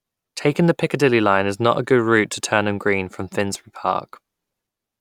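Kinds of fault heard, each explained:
Repeated buffer: new audio failed to reach the playback device in time, so it replayed its most recent block instead, twice more, with a hard join at each repeat. Each block lasts about 1.33 ms, which fits a 64-sample buffer, so the three back-to-back copies are far too short to hear as a stutter. At 3.55 s in this speech they come through as a brief click or buzz, and a few milliseconds of the real speech are lost.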